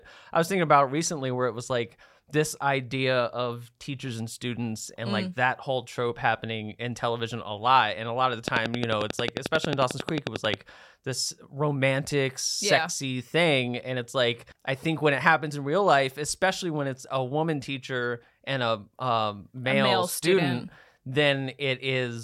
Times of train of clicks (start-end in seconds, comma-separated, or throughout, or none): 8.48-10.55